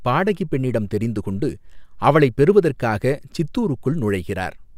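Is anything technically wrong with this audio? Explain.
No, nothing technically wrong can be heard here.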